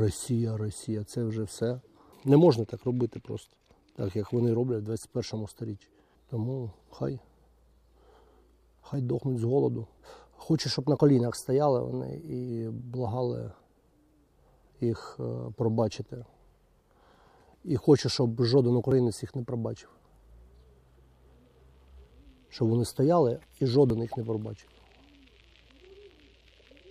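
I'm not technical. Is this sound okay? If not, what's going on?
No. First, audio missing between chunks: the recorder likely works in 5-second pieces and drops a tiny sliver at each join, causing brief skips at 8.94, 18.92 and 23.90 seconds.

Second, a drift correction step: software likely keeping two clocks in line briefly changed playback speed by about 6%, shifting pitch nearly a semitone from 10.62 to 12.49 and 22.89 to 23.68 seconds.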